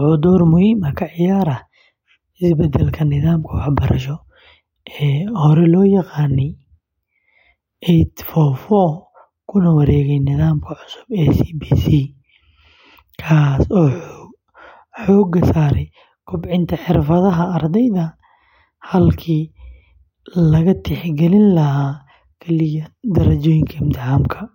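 No technical faults turn up at any point in the speech.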